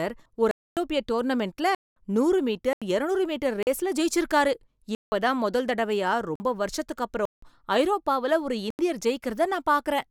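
A speech clip broken by eight blocks of digital silence. The dropouts sit at 0.51, 1.75, 2.73, 3.63, 4.95, 6.36, 7.25 and 8.70 s. They last from about 42 to 256 ms. One follows "டோர்னமென்ட்ல நூறு", another follows "இருநூறு மீட்டர்". Each gap drops straight to silence and snaps back with no fade. The 85 and 171 ms holes fit 4096- and 8192-sample blocks, pointing to output buffers left unfilled in time.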